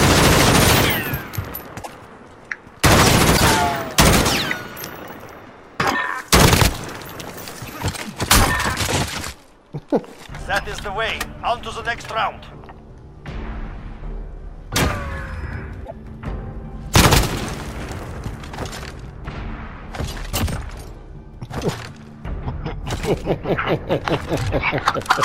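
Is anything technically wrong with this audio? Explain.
Yes. At 1.82–1.89 s, 3.36–3.42 s, 7.96–7.99 s and 15.85–15.92 s the sound skips forward and briefly garbles. This is likely a broken MP3 bit reservoir, with frames after a cut reading borrowed data that isn't there. Unlike a plain dropout, the sound jumps ahead in steps that fit roughly 26 ms frames.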